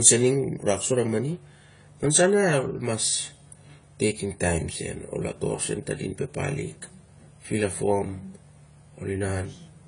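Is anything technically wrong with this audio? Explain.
Yes. AAC compression damage runs throughout the speech. The likely cause is an AAC-LC encode at a low bitrate near 24 kbps, which cuts everything above 10 kHz and coarsely quantises what remains, leaving the sound audibly dull, smeared and warbly.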